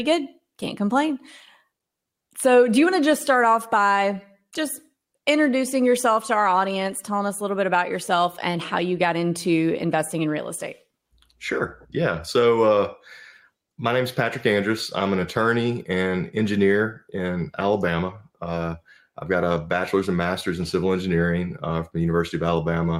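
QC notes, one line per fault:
Nothing stood out on listening to this clip.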